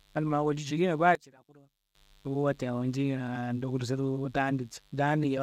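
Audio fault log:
throughout, mains buzz: A steady, raspy buzz sits under the speech from start to end, around 35 dB below it. It is built on 50 Hz, but sharp switching spikes at each half-cycle spread energy through harmonics up into the kilohertz range, so it sounds gritty and edged. A plain hum would be a smooth, dull tone at the mains fundamental. This points to a dimmer, rectifier or poorly shielded cable coupling into the signal path.
1.15 to 1.95 s, one channel inverted: Just after "cilina baayi" the speech suddenly collapses by about 24 dB for 0.8 s, leaving only a faint copy before full level returns. The likely cause is one stereo channel flipped in polarity, so the centred speech common to both channels cancels when summed to mono, and only their small differences survive. A dropout or mute would give true silence or a clean gap, not this weak residue.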